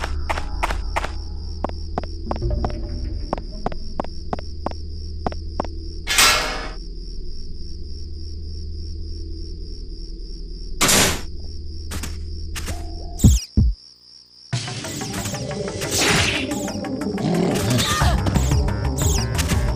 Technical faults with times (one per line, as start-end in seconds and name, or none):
0.00-19.75 MP2 compression
11.40-11.45 DAB burbling